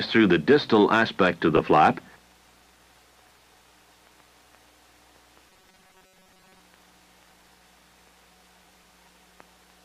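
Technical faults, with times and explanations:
1.57 to 1.59 s, 7.30 to 7.48 s and 8.64 to 8.84 s, frames out of order: each spot has a brief garbled flutter. Two neighbouring runs of frames were decoded in swapped order, so the sound plays with its halves exchanged. At 1.57 s each run is about 12 ms, so the glitch is very short. At 7.30 and 8.64 s each run is about 93 ms, so a longer piece audibly scrambles. No time is lost.
5.50 to 6.60 s, robotic sound from repeated short buffers: the sound becomes a rigid, metallic buzz near 188 Hz that only loosely follows the underlying audio. The likely cause is new audio arriving too seldom. The playback fills the gaps by looping the last tiny buffer, about 5.3 ms long, and that repetition rate imposes the fixed 188 Hz pitch. Roughly half the material in this stretch is repeats, and the real audio they replace is skipped.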